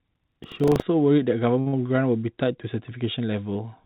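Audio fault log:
0.0–0.8 s, buffer tearing: A rattling, robotic buzz at 25 Hz rides on the speech and follows the signal, vanishing when the speech does. The program writing the ring buffer and the hardware reading it have slipped and cross inside each period. A small slice of every buffer, roughly 7 percent, replays audio about 70 ms old, with hard joins on both sides. A steady hum or mains interference would persist through silence, but this buzz does not.
1.6–1.68 s, short stall from a late packet: The sound just before 1.6 s is held for an extra 60 ms with a faint buzzy, slightly dipped quality. A packet arrived late, so the jitter buffer ran dry. The receiver stretched the last sound until the packet turned up, then resumed from exactly where it stopped. Nothing is lost, and the delay simply grows by 60 ms. That distinguishes it from a loss, which skips forward.
1.68–1.875 s, burst of packet loss: Straight after the stall, the last sound is carried on for about 46 ms and turned down as it goes, becoming a fading held buzz or hiss. 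Around 60 ms of speech is then missing outright. Packets were lost or came too late to play, so the concealment had to invent sound and then jump ahead. Unlike the stall, the audio picks up further on. Throughout the clip, the G.711 call path leaves nothing above 4 kHz.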